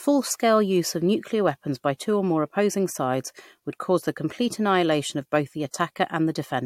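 Throughout the speech, the top end stops at 16.6 kHz, and two different textures of swirly, smeared coding artefacts sit on top of each other. This is likely transcoding between lossy codecs, consistent with MP3 near 96 kbit/s re-encoded as AAC-LC near 64 kbit/s.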